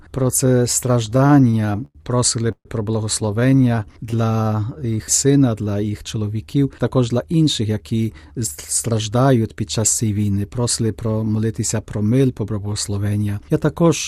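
Repeated stalls (stutter) run from 1.05 to 1.97 s. The jitter buffer kept running dry as packets arrived late, twelve times in all, and the receiver stretched the last sound over each wait. That adds 232 ms, about a quarter of the span. The longest hold lasts 98 ms and fades, so the audio drags and stutters while losing almost nothing.

A call audio freeze follows from 2.52 to 2.67 s. The likely cause is packets held up in transit, which emptied the buffer. The last sound carries on as a fading buzz or hiss for about 75 ms and then drops to 60 ms of silence. The audio then resumes where it stopped, with a 135 ms gap added and nothing cut.

From 3.26 to 4.80 s a jitter buffer slow-down plays the audio at 89% speed. The receiver repeated single pitch periods to rebuild its reserve, adding 170 ms. The pitch stays the same, but sounds are drawn out.

Inside that stretch, from 3.50 to 4.14 s, a second bout of repeated stalls (stutter) adds six brief holds totalling 78 ms. 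None lasts longer than 18 ms.

A jitter buffer speed-up runs from 6.65 to 8.41 s. The receiver trimmed short pitch-period pieces to shed excess delay, removing about a fifth of a second. The audio plays at 112% speed at the same pitch and sounds hurried.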